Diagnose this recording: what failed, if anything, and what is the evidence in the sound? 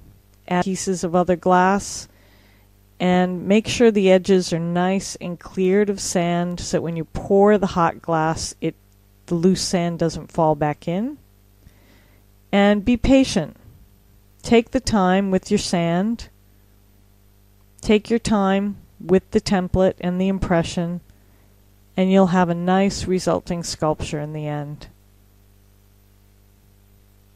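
Two isolated sharp clicks, at 4.36 s and 15.88 s, each a thin vertical line across the spectrum, indicate dropped samples, likely in the driver or buffer stage. About one sample is lost each time, so the waveform steps abruptly ahead without any sound going missing.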